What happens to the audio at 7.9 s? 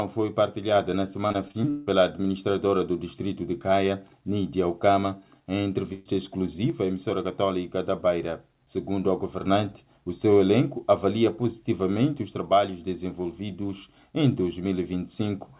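Nothing goes wrong at 7.9 s: the sound carries on intact through the call path, band-limited to nothing above 4 kHz as the G.711 A-law codec delivers it, with no dropout, glitch or other fault at that moment.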